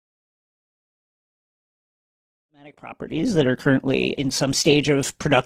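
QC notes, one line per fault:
1.76 s to the end: adaptive stream at a lower bitrate. At 1.76 s the speech quality drops suddenly, with no gap. Codec artefacts rise. The player has switched to a lower-bitrate version of the stream. The sound fits a step from Opus at 64 kbit/s down to 16 kbit/s. The reduced quality lasts to the end, also under the fade-in from around 2.5 s to 3.83 s.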